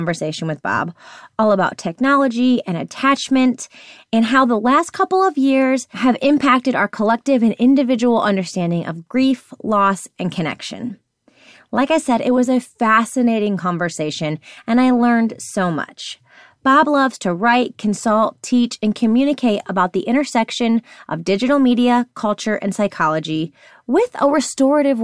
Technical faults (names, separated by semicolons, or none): none